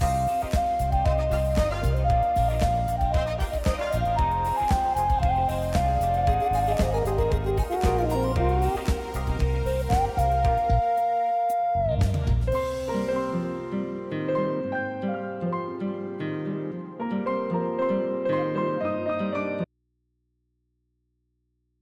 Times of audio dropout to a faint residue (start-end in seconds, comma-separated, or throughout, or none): 19.64-21.81